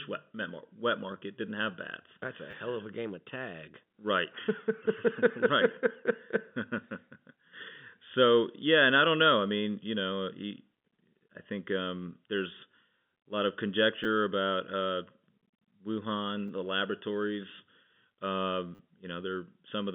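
Repeated buffer at 2.51 to 2.53 s, just before "hell of a game", then at 14.04 s between "a lot of" and "about uh", at 16.48 s just before "the laboratories", and at 18.75 to 18.79 s. Fresh audio arrived late each time, so the last 10 ms block, which fits a 10 ms buffer, replayed with hard joins. It played twice extra at 2.51 s and four times at 18.75 s, each heard as a brief buzzy click over the telephone-band sound.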